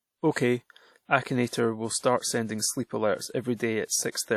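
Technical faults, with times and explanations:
Throughout, WMA compression: the speech was most likely encoded with an early Windows Media Audio transform codec at a low bitrate, in the region of 48 kbps. Long transform blocks smear quantisation noise across tens of milliseconds around each sound, and weak spectral lines are zeroed. The result is plainly audible: a ringing, washy quality on the speech, with a hiss that swells and fades in step with the signal.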